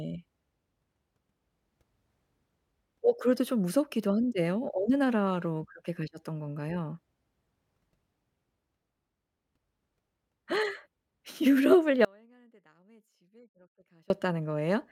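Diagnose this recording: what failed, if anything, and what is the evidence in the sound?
What failed is an audio dropout to a faint residue, most likely an intermittent analogue connection. The speech cuts abruptly at 12.05 s and returns at 14.10 s, roughly 2.05 s gone. The gap isn't silent: a faint residue sits about 35 dB down, so the path stayed live.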